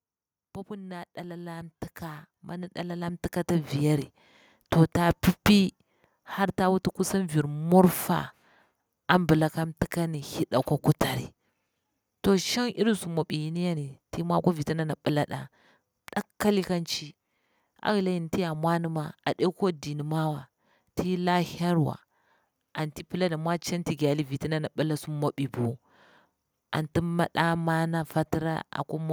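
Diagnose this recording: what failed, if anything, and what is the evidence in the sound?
Automatic gain rising, from 0.68 s to 14.05 s, is a call-processing fault. Across those thirteen seconds the whole speech signal climbs by about 11 dB, and the background floor rises in step with the voice. That shared, slow swell is the evidence: the automatic gain control judged the input too quiet and kept pushing its gain upward, lifting everything in the signal together rather than the talker alone.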